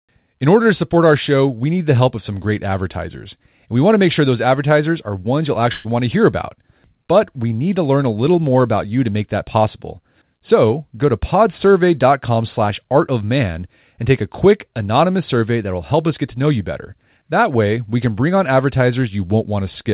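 At about 5.72 s, right after "advertisers are ones you'll", there's a burst of packet loss lasting until about 5.87 s. The receiver filled roughly 124 ms by stretching the last sound and letting it fade, so you hear a brief held, dimming tail with no true silence. When audio returns at "want to hear about", about 120 ms of the original is gone. The hard 4 kHz ceiling points to a narrowband G.711-style call codec.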